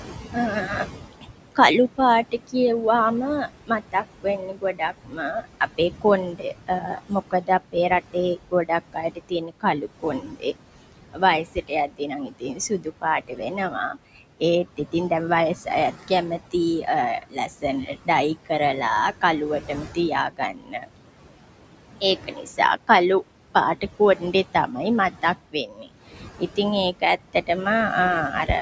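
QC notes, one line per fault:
Throughout: noise suppressor artifacts. The suppressor is pulling the steady room noise down by about 18 dB between phrases, then letting it back up under the talking, so the background pumps.
1.21–2.54 s, 3.48–15.11 s, 15.65–18.51 s, 19.12–20.89 s, 22.01–27.49 s: speech cut by the noise suppressor. It mistakes quiet bits of speech for noise and ducks them by up to about 18 dB, so soft consonants and word endings get swallowed. The longest stretch is around 3.5 to 15 s.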